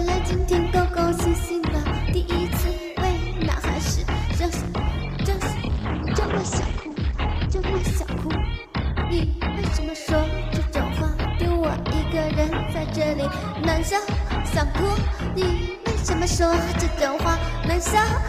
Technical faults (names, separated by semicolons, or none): call bitrate drop